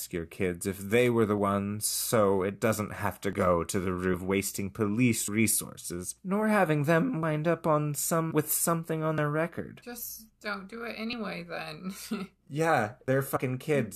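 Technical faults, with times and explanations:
1.38, 3.33, 5.28, 7.23, 9.18, 11.13 and 13.08 s: audio missing between chunks. Short skips recur about every 2 s, each losing around 50 ms. One falls between "it doesn't have to" and "to the", another between "resources nor having them" and "up on", and another after "with something on". The sound jumps straight across each gap with no silence. The likely cause is a processor working in 2-second chunks and dropping audio at each handover.
4.13, 8.30 and 13.35 s: compressed frames skipped. The audio leaps ahead, by about 100 ms at 4.13 and 13.35 s and about 150 ms at 8.30 s. Each jump fits a few whole frames of about 23.2 ms.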